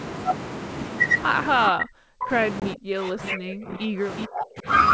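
Speech on a wideband call shows three kinds of fault. In speech suppressed in double talk, the echo canceller, likely confused by both sides talking at once, turns down the near talker along with the echo it is trying to remove. The voice sinks or breaks up from 1.69 to 2.31 s, dropping by roughly 40 dB at its deepest. It does so again from 2.74 to 4.08 s, at about 35 dB, and from 4.26 to 4.68 s, at about 30 dB. Packet loss on an ADPCM call strikes at 2.60 s. About 20 ms of audio goes missing, which fits a single lost packet. The decoder fills the gap with silence, leaving a hard-edged hole. Because its adaptive predictor and step size drift away from the sender's, the speech returns slightly distorted before settling. An echo leak follows from 4.18 to 4.24 s. A loudspeaker on one side, likely with an echo canceller that failed to clear everything its microphone caught, sends back a short scrap of the voice delayed by 374 ms, roughly 10 dB below the speech. 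The G.722 coding carries the speech up to around 7 to 8 kHz, with the microphone processing's gentle bass cut beneath it.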